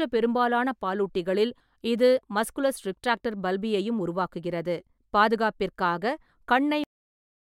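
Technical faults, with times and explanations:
6.84 s, cut-off end: the speech stops abruptly in the middle of a sound and falls straight to digital silence for the remaining 0.67 s, with no natural decay or room tail trailing off. It happens because the final stretch of audio was never written out or played back, so the recording ends wherever the last buffer that made it through happened to finish.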